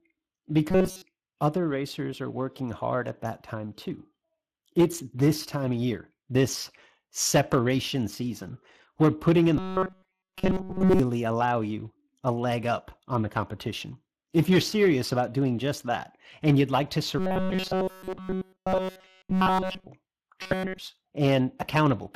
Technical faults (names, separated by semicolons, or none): Speex codec; robotic sound from repeated short buffers